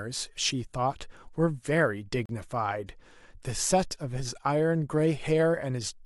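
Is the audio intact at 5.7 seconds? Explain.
Yes, the speech runs intact through 5.7 seconds, with no audible fault at that moment.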